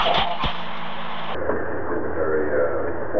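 From the start to about 1.35 s there's a wrong sample rate problem: the samples are being clocked out twice as fast as they were captured, with no resampling in between. That fits 8 kHz material played back as if it were 16 kHz. Because speed and pitch are tied together here, the sound runs at double speed and jumps up a full 12 semitones, a whole octave, so it comes across as squeaky and rushed.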